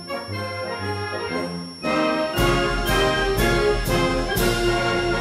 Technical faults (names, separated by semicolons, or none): switching supply whistle